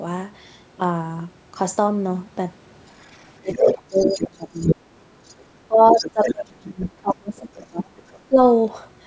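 From 3.0 to 4.74 s the other side's voice is leaking through, only about 5 dB below the near talker, which points to loudspeaker playback that the echo canceller likely failed to subtract from the microphone. Overlapping it, from 3.39 to 5.09 s, the near speech is suppressed in double talk. The canceller, likely unable to tell its own talker from the echo, pulls the level down, dipping by roughly 30 dB at worst and affecting around one and a half seconds in total.

A faint scrap of far-end leakage, about 35 dB down, appears at 5.29 to 5.33 s, again likely residual echo. From 5.68 to 8.38 s the double-talk suppression returns, likely for the same reason. The near voice drops by up to roughly 30 dB over about two seconds of that span. Within it, from 5.88 to 7.09 s, the other side leaks through around 10 dB below the speech, likely uncancelled loudspeaker echo. A final faint burst, about 35 dB down, sits at 7.97 to 8.19 s, likely more of the same leakage.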